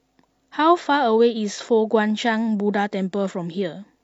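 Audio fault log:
No faults heard anywhere in the speech.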